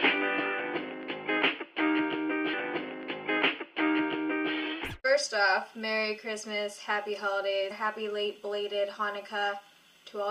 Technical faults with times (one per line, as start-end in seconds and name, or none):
2.53-4.53 stream segment repeated